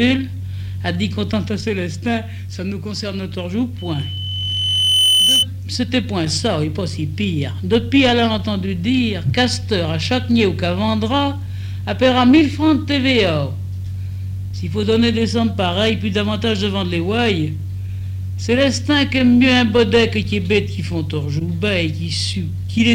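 Throughout the clip, a block size mismatch (truncated) is present: one stage hands over blocks longer than the next stage reads, so the tail of every block is discarded. Each cut leaves a seam, and the seams repeat at 43.1 Hz, which fits blocks of about 1024 samples. The result is a low, steady buzz under all of the audio. The playback speed is unchanged, running at 1.0 times normal with its pitch intact.

From 3.78 s to 5.46 s, a loudspeaker feedback squeal appears. A microphone picks up the loudspeaker it is feeding, and at 3 kHz the gain around that loop rises above one, so the tone keeps reinforcing itself. It is heard as a single high whistle that swells over roughly one and a half seconds. It peaks at around 5 dB above the rest of the sound before it stops at 5.46 s.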